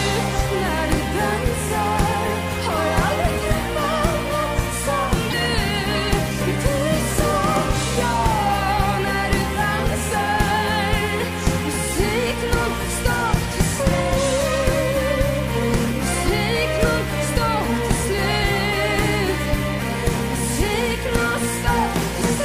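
Damaged data in a compressed stream causes brief glitches at 2.47 to 2.52 s and 5.29 to 5.34 s. Each lasts about 44 ms: corrupted bytes make the decoder misread the frames there and lose sync until it finds the next valid frame header.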